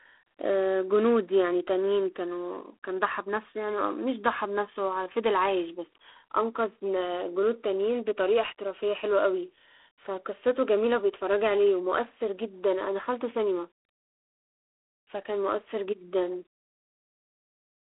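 All the way through you get G.726 ADPCM damage: a harsh, rasping hiss riding the speech level, nothing above 3.9 kHz, which fits 24 kbit/s coding.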